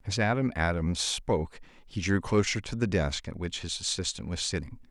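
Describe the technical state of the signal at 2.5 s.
At 2.5 s the speech signal is intact, with no audible dropout, distortion, glitch or other technical fault.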